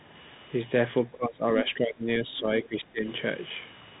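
From the start, the speech carries Bluetooth CVSD headset codec damage: nothing above 3.8 kHz, scratchy s sounds and a grainy hiss, which fits a 64 kbps one-bit-per-sample link. Between 1.05 and 3.05 s the speech keeps ducking, around 20 dB at its deepest for about a second and a half in total, likely speech suppressed in double talk by an echo canceller.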